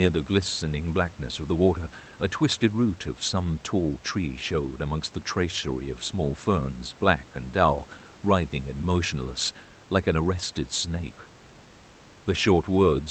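Speech heard over a WebRTC call path with no technical faults present: the band tops out around 8 kHz as expected for this Opus link, and the room noise sits about 28 dB below the speech.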